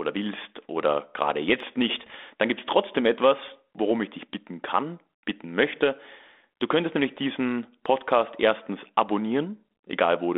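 Bit errors on an ADPCM link from 1.96 to 2.17 s, between "willst oder gerade jetzt" and "dann gibt's trotzdem etwas". Flipped bits, around half a percent, upset the decoder's step size and predictor, giving pops and rough bursts with brief level jumps.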